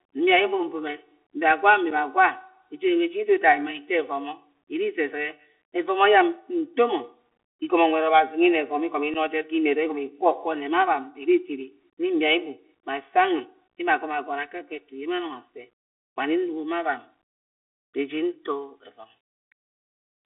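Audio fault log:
throughout: channel delay (comb filtering). One channel arrives about 3 ms behind the other, and the two are summed to mono. Parts of the speech common to both cancel at evenly spaced frequencies, starting at around 200 Hz. The result is a set of fixed notches across the spectrum. The speech sounds hollow and phasey, with a thin, tubular colour. The notches do not move, so the colouring stays steady for the whole clip.
throughout: Bluetooth CVSD headset codec. The speech sits in a narrow band of roughly 250 Hz to 3.5 kHz, so it has no low body and no air on top. The damage is plainly audible. A granular hiss lies under the speech. Loud, bright sounds outrun the codec's adaptive step and break up. Sibilants turn scratchy. The sound fits a one-bit-per-sample coder running at 64 kbps.
1.91 and 9.14–9.16: unconcealed Bluetooth headset packet loss. About 7.5 ms of audio drops out each time, right after "mibia gwa" and again after "evome igomo". 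The loss points to a single headset packet each time. Nothing fills the gap, so the sound cuts to silence and snaps back with hard edges. On this CVSD link, the speech also returns briefly quieter after each hole.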